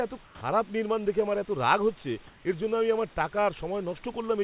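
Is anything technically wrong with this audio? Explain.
Yes. Comfort noise replaces the background at 0.26–0.41 s and 2.27–2.45 s. The room tone turns flat and featureless, about 3 dB quieter at first. Discontinuous transmission likely filled these pauses with synthetic noise.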